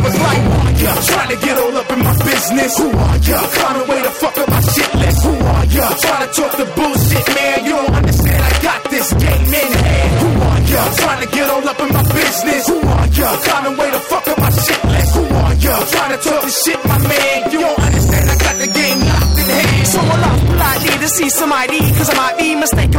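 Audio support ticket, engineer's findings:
Hard clipping throughout the clip. Harsh fuzz on every loud passage. Signal driven about 11 dB past a converter or gain stage, so close to a third of samples are cut flat. Waveform: squared-off, flat-topped peaks. Spectrogram: dense harmonic smear extending well up into the high kHz range.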